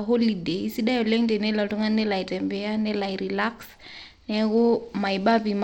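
Across the whole speech clip, the signal has likely passed through Bluetooth SBC compression with a small bit pool, consistent with around 96 kbps. Starved of bits, the treble thins out and flickers, while coarse quantisation leaves plainly audible grit and aliasing on the speech.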